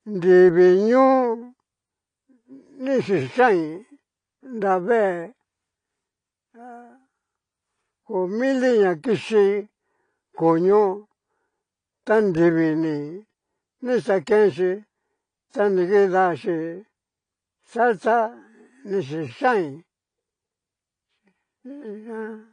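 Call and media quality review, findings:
Dull, band-limited speech throughout the clip. Nothing above 10.1 kHz. Sibilants are smeared and fizzy. Sustained sounds warble. Likely AAC compression, AAC-LC. Coarse quantisation against a hearing model drops the top band and thins the spectrum. Fits a low bitrate near 32 kbps.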